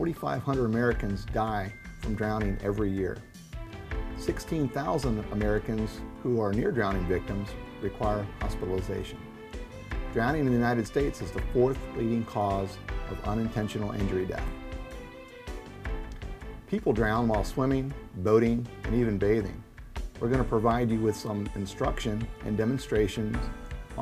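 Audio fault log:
10.86 s, 14.48 s and 16.68 s: dropped buffer (overrun). Each is an abrupt jump in the sound with no silence. Likely overwritten before being read, skipping roughly 30, 30 and 10 ms.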